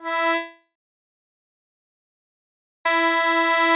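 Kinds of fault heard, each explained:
Long network dropout: at 0.35 s the sound smears into a fading buzz, then 2.15 s of silence, likely from lost packets, before resuming at 2.86 s.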